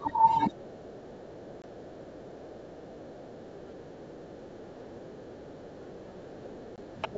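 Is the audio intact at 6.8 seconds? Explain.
No. Just before 6.8 seconds a packet was lost on what behaves like an ADPCM call: one packet of about 20 ms went missing between 6.76 and 6.79 s and was filled with silence. The decoder's adaptive predictor and step size then no longer track the sender's, so the sound drops into a hard-edged hole and comes back slightly distorted before it settles.

The moment also sits inside speech suppressed in double talk, which runs from 0.0 to 7.17 s. With both ends active at once, the echo canceller likely could not tell the near talker from the loudspeaker echo and pulled everything down, by about 10 dB at its deepest. Around 6.8 s the speech therefore sounds ducked and uneven in level, dulled or thinned at the top, rather than steady.

On top of that, the other side's voice is leaking through from 5.69 to 7.17 s. The far-end audio plays from the device's loudspeaker back into its microphone, and the echo canceller likely failed to strip all of it out. 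A second, quieter voice about 20 dB below the main speech comes through underneath, faint.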